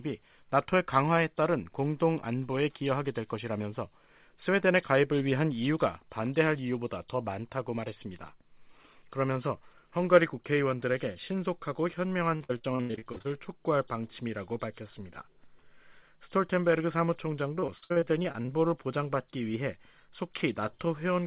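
From 12.36 to 13.42 s the sound turns choppy, with short holes in rapid succession, the longest about 85 ms, and roughly 40% of that stretch patched over. From 17.60 to 18.50 s it happens again, with gaps up to about 59 ms and about a third of the span patched. This is repeated packet loss (robotic sound): packets kept going missing, and each hole was filled by stretching the last sound, leaving choppy audio with pieces missing. The band stops at 4 kHz, which fits a narrowband G.711-style call path.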